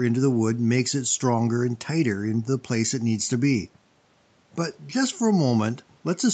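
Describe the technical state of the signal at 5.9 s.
At 5.9 s the speech is intact, with no dropout, glitch or other fault, only the ordinary band-limited sound of a call path that carries nothing above 8 kHz.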